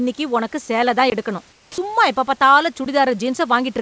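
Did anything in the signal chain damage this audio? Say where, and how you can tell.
Yes. At the driver or buffer stage, a block of digital silence cuts in at 1.10 to 1.12 s, after "உனக்கு சேல தான்", and another at 2.85 s, after "எப்ப பாத்தாலும்". Both are abrupt drops to silence with no fade, which points to output buffers left unfilled.

In call processing, sound dropped by the voice detector leaves steady comfort noise from 1.52 to 1.78 s, after "உனக்கு சேல தான் எடுக்கணும்", until "எப்ப பாத்தாலும்" returns. About 100 ms of the speech tail is lost. The smooth noise fill sets it apart from the silent blocks, and the likely cause is the sender's detector treating the word ending as background. Nothing is heard above 8 kHz, which fits the G.722 call codec.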